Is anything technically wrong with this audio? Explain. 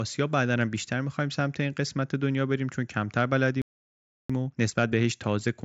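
Yes, there are two related faults.

From 3.62 s to 4.30 s there is a playback stall. The speech stops mid-flow and the output goes silent for about 0.68 s. The likely cause is the player running out of buffered data, or its thread being blocked, before it recovers and resumes.

From 4.30 s to the end at 5.64 s comes a time-compressed catch-up. The player trims its backlog by cutting out small pieces and cross-fading them. Speech runs about 1.15 times fast at unchanged pitch, sounding hurried.

The band stops near 8 kHz, which fits the wideband mSBC Bluetooth headset codec the audio passed through. That path is not a fault.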